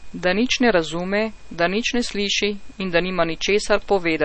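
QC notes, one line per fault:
throughout, MP3 compression: the speech sounds plainly watery and swirly, and nothing is present above 8.3 kHz, likely from MP3 coding at a low bitrate that fits 32 kbps. A spectrogram shows a hard flat ceiling at 8.3 kHz with weak upper bands flickering in patches.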